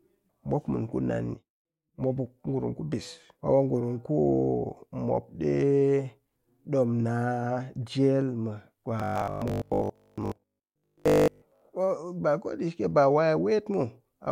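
From 9.00 s to 11.62 s, the speech takes on a robotic sound from repeated short buffers. The voice becomes a stiff, metallic buzz pitched at 50 Hz. It still roughly tracks the words. The likely cause is new audio arriving too seldom. The software fills the gaps by looping the last 20 ms, which fits that 50 Hz pitch. Repeats fill most of the stretch, so much of the real speech there is skipped.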